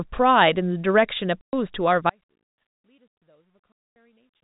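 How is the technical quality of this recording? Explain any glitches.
Technical quality is poor: the speech breaks up twice into hard silent holes, and from just after two seconds it collapses to a faint residue that lasts to the end. All of this sits within a telephone-band G.711 signal, which shows no energy above 4 kHz.

The first packet loss filled with silence runs from 1.42 to 1.53 s, a hole of about 120 ms. A second runs from 3.72 to 3.96 s, about 240 ms. Packets failed to arrive and the receiver played silence in their place. The gap lengths are exact multiples of one another, which fits a 30 ms packet size. Each hole starts and stops abruptly. On a waveform these are flat, near-silent stretches with vertical edges, and on a spectrogram they are dark columns.

The audio dropout to a faint residue begins at 2.10 s and lasts to the end. The speech cuts out in mid-flow and does not come back. 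Only faint sound remains, around 40 dB below normal level, which suggests the wanted signal was likely lost while the path after the break stayed live. The change is instant, not a pause or a fade. On a waveform the envelope drops in a step to a thin trace, and a spectrogram shows a sharp boundary into near-darkness. The 3.72 s silence cuts a darker notch even inside that faint residue.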